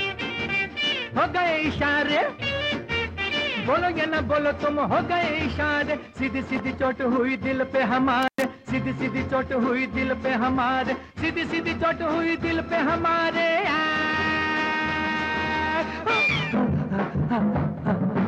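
A single intermittent contact fault occurs between 8.23 and 8.44 s. A loose cable or connector briefly loses its connection, and the audio drops out for about 106 ms inside that span. The break and the reconnection each produce a short crackle as the contact scrapes open and shut, and faint hiss remains while the line is open. The sound returns once the contact closes again.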